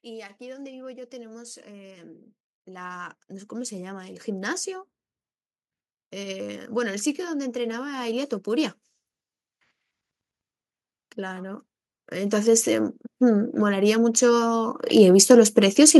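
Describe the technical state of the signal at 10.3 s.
At 10.3 s the speech signal is intact, with no audible fault at that point.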